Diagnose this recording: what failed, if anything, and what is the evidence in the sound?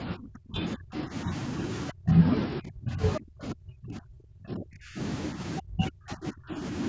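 Call processing is where this falls apart, with speech suppressed in double talk. The talker drops away at 0.03–1.32 s, 1.91–2.15 s, 2.6–3.02 s, 3.18–4.99 s and 5.6–6.63 s, often by around 35 dB, plus a slight dip at 5.33–5.42 s. That's likely the echo canceller mistaking overlapping talk for echo and ducking everything.

There's also the other side's voice leaking through, a brief scrap at 3.15–3.2 s sitting only a few dB under the talker. Likely the same canceller failing to scrub the loudspeaker signal out of the microphone path for that instant.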